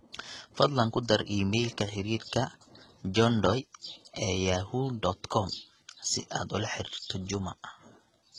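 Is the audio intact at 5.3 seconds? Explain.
No, the speech at 5.3 seconds, as throughout, likely went through heavy HE-AAC compression at around 16 kbps, whose rebuilt treble leaves s sounds gritty and lispy, with nothing above 13.7 kHz.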